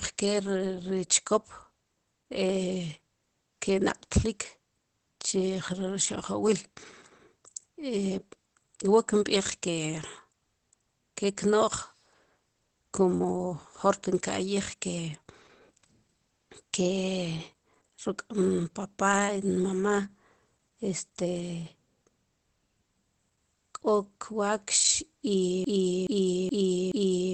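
Throughout, Opus voice compression in SILK mode leaves nothing above 8.4 kHz and plainly audible coarse, muffled, slightly hoarse speech, which points to roughly 12 kbps. From 25.6 s to the end, a broken-record loop repeats a 0.42 s fragment four times back to back, likely because the stream stalled, and the audio that should have followed is lost.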